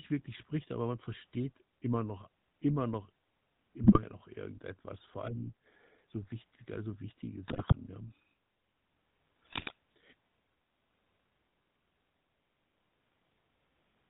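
A speech recording carried over a GSM full-rate codec from start to finish, with plainly audible codec damage: a buzzy, gravelly roughness and no content above 4 kHz. The sound fits the 13 kbps full-rate coder, which models the vocal tract as a filter and drives it with a coarse, regularly spaced pulse excitation that keeps only every third sample. That pulse train gives the voice its grainy texture, and the narrow band leaves it dull and boxy. On top of this there are three bursts of GSM bit errors: 3.84 to 4.01 s, just before "noch irgendetwas vor allem"; 7.48 to 7.75 s, right after "so wichtig also wichtige"; and 9.52 to 9.73 s. In each, the decoder is fed corrupted filter, pitch and gain parameters, so the spectrum bends and the level jumps for 6 to 12 frames. The voice breaks into squawks, pops and gargling. The density of the damage points to an error rate of several percent on a weak radio link.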